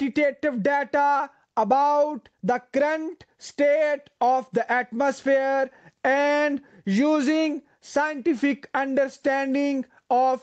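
A speech recording with gain pumping throughout, a level swing of around 10 dB. The likely cause is input gain set far too high, with a fast limiter or compressor clamping down on every peak. A noise gate would drop the gaps toward silence instead. The call microphone processing keeps the sound band-limited, with nothing above 8 kHz.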